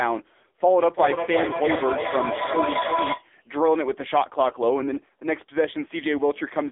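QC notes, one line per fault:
throughout: AMR narrowband mobile codec. Buzzy, synthetic speech with nothing above 3.8 kHz; the heavy damage fits a low mode near 6.7 kbps.
0.81–3.29 s: feedback echo between two devices. The speech returns about every 0.3 s, thinning and ringing, peaking about 4 dB below speech, as one device replays another's microphone.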